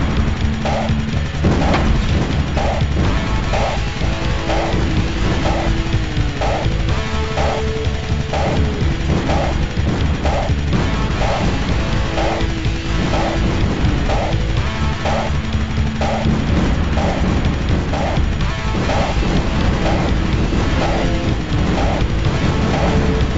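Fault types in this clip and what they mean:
No faults can be heard.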